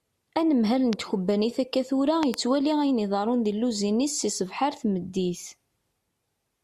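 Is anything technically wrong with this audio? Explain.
Yes, there are two loud pops, most likely from a sudden voltage spike entering the signal chain, perhaps static or a switch. They sit about 15 dB above the speech, which continues underneath: a single sharp pop at 0.93 to 0.95 s, then a quick double pop from 2.23 to 2.36 s.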